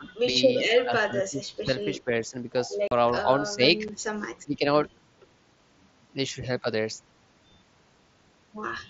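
A speech recording carried over a wideband mSBC Bluetooth headset link, whose band stops at 8 kHz with a light grain on louder syllables. The speech level repeatedly sags in a way that is likely speech suppressed in double talk, where an echo canceller cannot separate the near talker from loudspeaker echo while the far side is speaking and turns both down. The dips fall at 0.00 to 0.05 s (about 15 dB), 0.80 to 2.34 s (the longest and deepest, roughly a second of attenuation reaching about 25 dB), 3.23 to 3.28 s (about 5 dB), 3.48 to 3.61 s (about 10 dB) and 4.45 to 4.65 s (about 15 dB). There are also two hard-edged holes from unconcealed Bluetooth headset packet loss, where voice packets between headset and phone never arrive and nothing fills the gap. The first, 2.88 to 2.92 s, is a 37.5 ms dropout that fits about five consecutive 7.5 ms packets. The second, at 3.88 s, is a single 7.5 ms gap.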